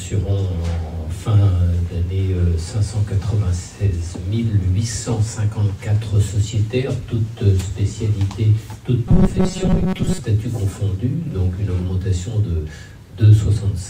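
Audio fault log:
0.0–2.0 s, adaptive stream starting at a low bitrate: The opening is dull and smeared, with thin or synthetic-sounding treble and stronger codec artefacts. At 2.0 s the quality steps up abruptly with no gap. The player began on a cheaper version of the stream so playback could start at once, then switched to a richer one after gauging the connection. The difference is consistent with a jump from about 32 to about 64 kbit/s Opus.
9.07–10.20 s, robotic sound from repeated short buffers: For just over a second the audio turns into a stiff, metallic buzz pitched at 188 Hz. It still loosely follows the shape of the underlying sound. The likely cause is fresh audio arriving too slowly, so the software fills the gap by looping the last sliver, about 5.3 ms long, again and again. That fixed loop length sets the buzz pitch, and most of the real audio in this stretch is skipped.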